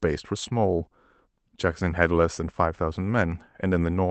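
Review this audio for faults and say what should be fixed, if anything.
No faults turned up in this audio, so nothing needs to be fixed.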